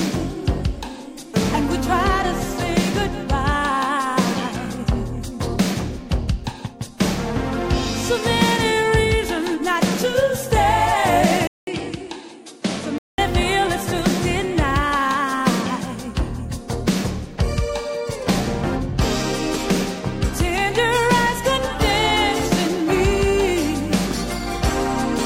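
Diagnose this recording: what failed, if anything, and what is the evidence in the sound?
Between 11.47 and 13.18 s the top end vanishes above 11.4 kHz, level drops about 5 dB, and a 200 ms gap opens: likely an input switched to a poorer device.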